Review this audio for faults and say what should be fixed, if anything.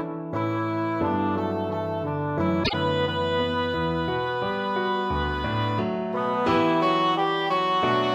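Frames out of order at 2.63 to 2.74 s: two adjacent single frames of about 26.1 ms each were decoded swapped, producing a brief garbled flutter and no lost time. Fix by enforcing sequence-number reordering in the receive buffer before decoding.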